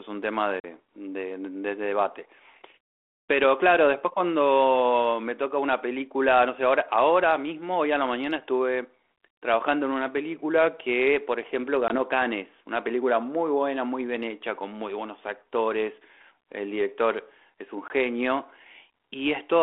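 Packet loss on an ADPCM call at 0.6 s (about two packets, 40 ms), 11.88 s and 17.88 s (one packet, 20 ms each) leaves hard-edged silent gaps. The decoder's predictor and step size fall out of step, so speech resumes slightly distorted, settling within tens of milliseconds.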